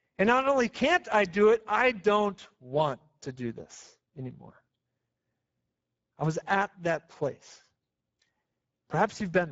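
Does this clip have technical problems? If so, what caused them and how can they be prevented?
Yes: Speex codec damage runs throughout, with hoarse, noisy speech and nothing above 7.7 kHz. This fits a bitrate of around 10 kbps, too few bits for the excitation. Prevent it by encoding at a higher Speex quality setting or using a modern codec such as Opus.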